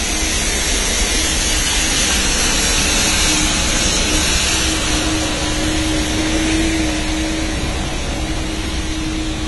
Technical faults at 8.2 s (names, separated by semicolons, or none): AAC compression